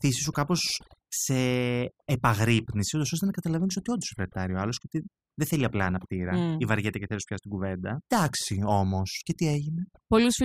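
Across the whole speech clip the background drops and breaks up into twinkling, chirpy specks. That is overdone noise removal: a noise reducer set too aggressively cuts individual frequency bands hard whenever they sit near its noise estimate, taking the quieter parts of the voice along with the noise.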